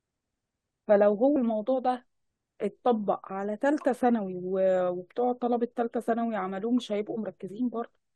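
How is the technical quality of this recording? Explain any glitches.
The recording has one glitch. At 1.36 s, compressed frames are skipped. About three whole frames of the encoded speech never reach the output, either missing from the file or rejected by the decoder as damaged. The frames appear to be 32 ms long, so roughly a tenth of a second of audio simply vanishes, and the speech jumps forward at that point.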